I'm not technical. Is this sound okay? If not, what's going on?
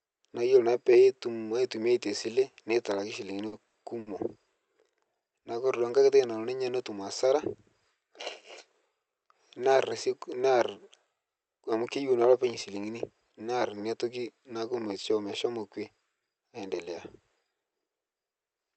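No. The speech has two kinds of problem.

First, three short stalls from late packets, at 3.47, 3.68 and 3.99 seconds. Each time, a piece of the audio arrived late over the network, and the receiving end ran out of sound to play. It stretched the last bit of sound until the piece showed up, for 50, 60 and then 70 milliseconds. Nothing is lost, but the sound hangs for a moment, sometimes with a faint buzz or dip.

Second, a jitter buffer speed-up from 9.22 to 9.90 seconds. The receiver had more audio waiting than it wanted, so it caught up by snipping out many tiny slices, about 40 milliseconds in total. The speech plays about 5 percent faster at the same pitch and sounds hurried.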